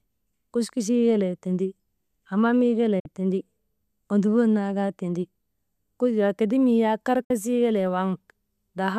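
Speech with two digital broadcast dropouts, at 2.99 to 3.06 s and 7.24 to 7.31 s. Each time the receiver fades out over about 8 ms, mutes for roughly 48 ms (which fits two lost frames), then resumes later in the programme. The short fade into true silence distinguishes these from clicks, stutters or packet-loss concealment.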